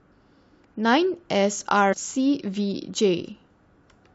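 At 1.92 to 1.94 s the speech lurches forward where compressed frames were skipped: the decoder never played a short run of them, so roughly 150 ms of audio is simply gone, which fits several frames of about 23 ms each.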